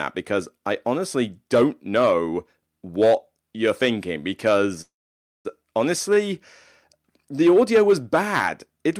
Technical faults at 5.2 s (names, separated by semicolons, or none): call audio freeze